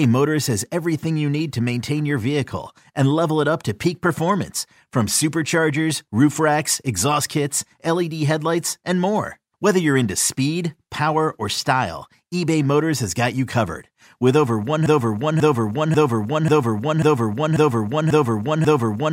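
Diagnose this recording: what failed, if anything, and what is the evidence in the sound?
A broken-record loop takes over at 14.86 s and runs right to the end. A chunk of about 0.54 s plays back to back eight times, identical each pass, so the speech just stutters in place. The likely culprit is a stall at the buffer or playback stage: the player, encoder or stream stopped getting fresh data and kept re-sending the last fragment it held. Whatever should have followed 14.86 s is simply gone.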